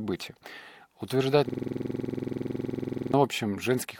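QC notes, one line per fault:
1.49–3.14 s, system hang loop: the audio freezes into one 46.4 ms fragment repeated 35 times, so the same slice cycles at 21.5 Hz for about 1.6 s. This happens when the host or driver stalls while the sound hardware keeps replaying its ring buffer. A loop that length fits a 2048-sample buffer, and it sounds like a hard, rapid mechanical stutter verging on a rough buzz, with no forward movement until playback resumes.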